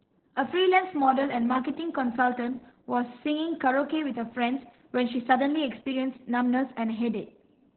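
From start to finish the speech sounds muffled, hoarse and faintly robotic, with everything above about 4.3 kHz gone, so sibilants and consonant edges are dull and boxy. This is heavy Opus voice compression. The narrow band points to the codec's narrowband SILK mode, where linear prediction models the voice and the excitation is coded coarsely. That rough excitation causes the grainy, synthetic texture, and the damage fits a bitrate around 8 kbps.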